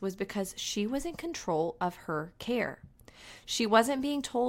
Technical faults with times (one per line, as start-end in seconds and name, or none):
none